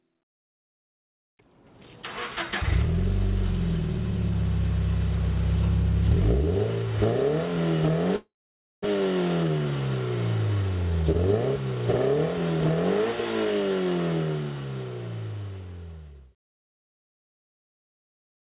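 At 8.16 s the sound breaks off and a fading buzz carries on from the last moment before dying into silence for about half a second, until 8.86 s. This is a long network dropout, likely caused by a stall in packet delivery. When playback resumes it comes in further along, with roughly 0.4 s never heard. A brief burst of packet loss would leave only a short smeared patch, but here the concealment gives out entirely and leaves a real gap.

Right after, from 8.94 to 9.81 s, the audio hurries along at about 117% of its pace while the pitch stays put. This is a jitter buffer speed-up. The dropout had left a backlog of delayed audio, roughly a few hundred milliseconds, and the receiver trimmed tiny pitch-period slices, around 150 ms in all, to catch up. Unlike a resampling error, which would raise the pitch along with the speed, only the timing tightens. Throughout, the G.711 call path keeps everything below 4 kHz.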